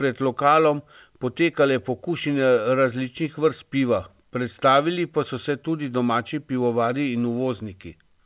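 No technical faults occur in the speech, which arrives over a call path whose G.711 A-law coding leaves nothing above 4 kHz.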